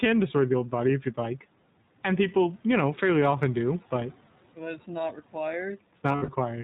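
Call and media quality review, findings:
iLBC codec, whole clip: band-limited to 4 kHz, speech clear but rough and synthetic, which fits the 15.2 kbps, 20 ms frame mode. Each frame's excitation is coded independently. Unlike a plain low-pass filter, the roughness comes from the coding itself. Room noise sits about 26 dB under speech.

Lost iLBC frames, 6.12–6.29 s: gap filled with a held, buzzy or breathy vowel, not silence. Decoder repeats the last pitch cycle mixed with noise across 120 ms of losses scattered over 160 ms, longest run around 70 ms. Speech recovers immediately after.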